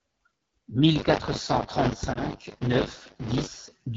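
A speech clip that sounds rough and raspy from start to finish, with a thin, buzzy edge to the voiced sounds and hissy, noise-like upper frequencies. That is the AMR wideband (HD Voice) codec at one of its lowest rates, consistent with about 8.85 kbit/s. At that rate the coder cannot model the pulse excitation and vocal tract finely enough below 6.4 kHz, and the band above that is filled only with shaped noise, so the damage is plainly audible throughout. From 0.95 s to 3.48 s a steady robotic rattle at 100 Hz rides on top of the speech and is present only while there is sound to carry it. This is buffer tearing: the writer and the hardware reader of the playback ring buffer have drifted so that they cross inside every 10 ms period. Roughly a third of each period replays audio from about 40 ms earlier, and the hard joins on either side of that stale stretch repeat a hundred times a second. 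Within that stretch, from 2.13 s to 2.18 s, the sound briefly dips and warbles for 20 ms before recovering with a moment of weakness. That is a lost AMR speech frame, consistent with a single frame failing its checksum, after which the decoder concealed the gap by reusing the previous pitch and vocal tract settings at reduced gain.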